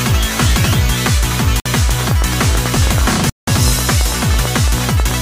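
At 1.60 s the sound cuts to silence for about 56 ms and then carries on, and at 3.30 s a longer gap of about 179 ms follows, ending at 3.48 s. These are Bluetooth stalls, likely caused by interference holding up packets until the headphones' buffer ran empty. Unlike a click or crackle, a stall is a clean gap of nothing.

From 1.89 s to 5.12 s a train of clicks runs over the sound at a steady 9.1 per second, around thirty in all, standing roughly 10 dB above the signal. It is likely caused by interference or a faulty connection or supply. The evenly spaced, same-shaped pulses continue through pauses, which sets them apart from random crackle.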